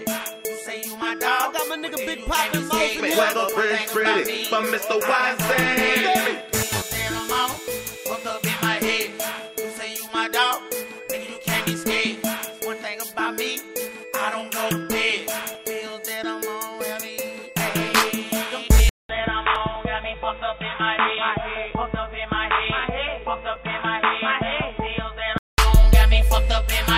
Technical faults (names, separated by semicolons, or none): input switched to a poorer device; overlapping chunks